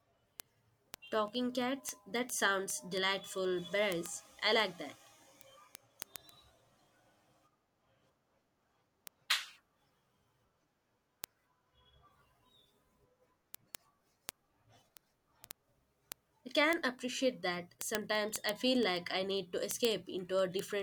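Speech, with word clock ticks from 0.13 s to 20.80 s: a steady tick about every 0.07 s, some 300 in all. The receiver runs on its own unlocked clock, roughly 300 ppm off, so one sample slips at each crossing.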